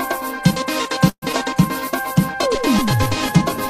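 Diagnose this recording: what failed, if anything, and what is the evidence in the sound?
From 1.09 to 1.24 s the sound stretches into a fading buzz or hiss that drops into roughly 60 ms of near-silence before resuming exactly where it left off. This is a call audio freeze at the network stage. The likely cause is packets arriving late, which drained the jitter buffer. The receiver extended the last sound for about 127 ms rather than drop anything, so nothing is lost, but the stream now runs about 127 ms behind.

At 1.32 to 1.35 s there is a brief smear where about 40 ms of audio never reached the decoder in time. This is short concealed packet loss, again on the network path. The receiver bridged the hole with only about 9 ms of synthesized continuation before blending back into real audio, so most of the gap is simply skipped. That pulls the delay back by roughly 30 ms and recovers part of the lag from the earlier freeze.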